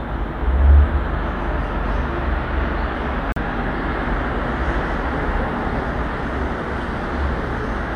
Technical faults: Bluetooth stall

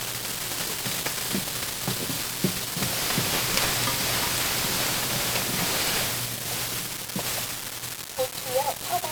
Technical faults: 1-bit DFPWM compression

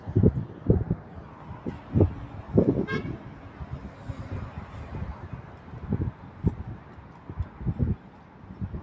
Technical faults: noise suppressor applied to music or sounds

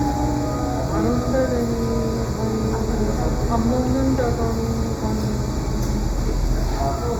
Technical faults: channel delay (comb filtering)

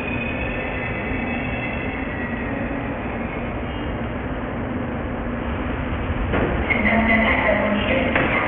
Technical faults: aliasing

